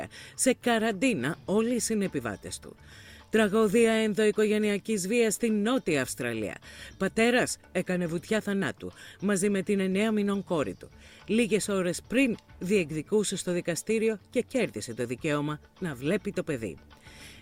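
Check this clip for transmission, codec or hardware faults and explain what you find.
No transmission, codec or hardware faults are audible here.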